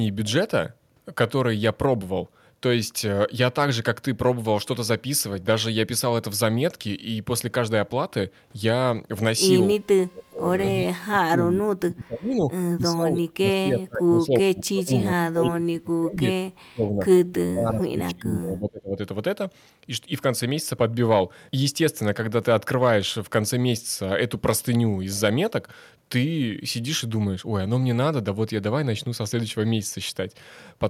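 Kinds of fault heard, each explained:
Speech suppressed in double talk: from 9.76 to 19.01 s the speech drops away in five stretches, sinking by up to around 40 dB. The likely cause is an echo canceller that cannot separate local speech from loudspeaker echo while both sides talk, so it turns both down.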